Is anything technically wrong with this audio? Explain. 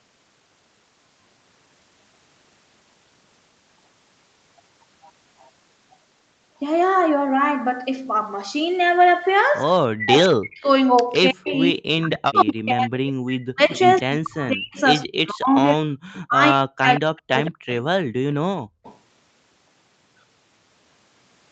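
Yes, the audio has three kinds of echo-canceller fault.

From 9.94 to 17.83 s, the speech repeatedly dips, by up to about 40 dB, for roughly 5 s in total. This is likely speech suppressed in double talk, where the canceller turned down the talker along with the loudspeaker echo.

A faint delayed copy of the sound trails the speech, about 164 ms late and about 15 to 30 dB below it. It occurs at 11.13 to 11.18 s, 12.11 to 12.53 s, 13.76 to 16.21 s, 17.45 to 17.51 s and 18.83 to 18.98 s. This is likely echo leak, where the far-end loudspeaker playback got past the canceller and was sent back.

From 18.62 to 18.83 s, the room sound drops out by about 39 dB for roughly 0.2 s, then returns. This is background gated by the echo canceller, which clamped the microphone while the loudspeaker played.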